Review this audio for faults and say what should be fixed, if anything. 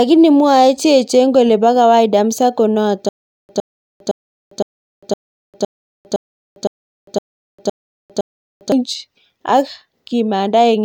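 After "kole po kawaida msako", a stutter with silent gaps runs from 3.09 to 8.72 s. A 111 ms fragment repeats 11 times, each followed by 401 ms of digital silence. This is likely a stalled stream replaying its last buffer, so the speech for that stretch is lost. Larger playback buffering and a proper recovery path on underrun would prevent it.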